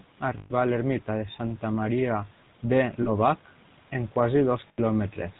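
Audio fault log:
throughout, GSM full-rate codec: the speech has a plainly audible buzzy, gravelly roughness, which fits 13 kbit/s GSM full rate. A vocal-tract model is driven by sparse regular pulses, and nothing passes above 4 kHz. Unlike plain band-limiting, the grain lies inside the voice itself.
0.38–0.51 s, 3.02–3.10 s, 4.68–4.80 s, lost GSM frames: the sound freezes into a rough metallic ring, just before "a l'ermita de" in the first case. The last good frame's settings are repeated. It rings rather than going silent, which sets it apart from a plain dropout.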